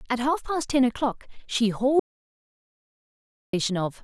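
At 2.00 s the speech cuts off abruptly in an audio dropout to silence, returning at 3.53 s; about 1.54 s is lost. The input was likely interrupted while silence kept being written, so the waveform goes flat and the spectrogram shows a blank gap with no room tone.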